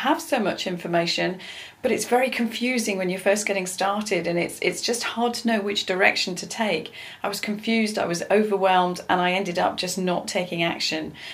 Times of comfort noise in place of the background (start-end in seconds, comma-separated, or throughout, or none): none